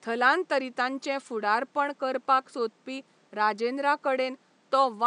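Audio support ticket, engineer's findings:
No system faults found.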